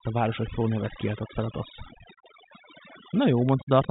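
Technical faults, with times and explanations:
Throughout, overdone noise removal. The noise reducer was set too strong. It pulls single frequency bands down or out whenever they sit near its noise estimate. The background drops and breaks into twinkling, warbling specks. Quieter parts of the speech get removed with it.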